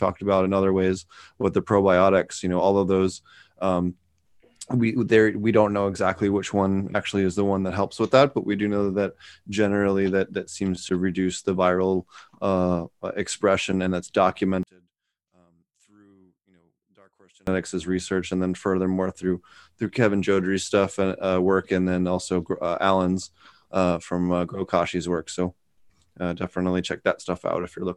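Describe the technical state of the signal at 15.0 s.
At 15.0 s one channel is inverted, from 14.63 to 17.47 s after "uh expression and that's": the speech drops by about 34 dB. That is likely a polarity flip cancelling the centred voice in mono rather than a plain dropout, since a faint residue remains.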